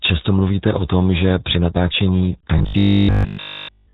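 From the start, the speech passes through the RealAudio 14.4 codec at 8 kbit/s. This dial-up-era codec discards everything above 4 kHz and damages the rest heavily, so the voice sounds muffled and gargly, with no sibilance or air.

At 2.59 s, just after "tom že při natáčení", robotic sound sets in and lasts to the end at 3.94 s. Essentially every moment of it is a repeat. The voice becomes a rigid, metallic buzz at 50 Hz that roughly tracks the syllables. The likely cause is a starved playback buffer looping its last 20 ms of audio while new material is skipped.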